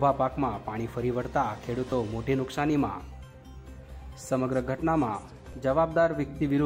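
Repeated buffer dropouts at 1.90–1.92 s and 5.53 s: late audio made the device replay a 10.67 ms block, fitting a 512-sample buffer, producing short buzzy stutters.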